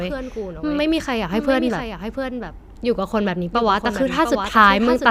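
From the start, the speech carries a doubled audio track. A second full-band copy trails the original by roughly 0.7 s, about 5 dB quieter. It has no decay or room tone. The likely cause is the signal being captured twice, once through a slower path.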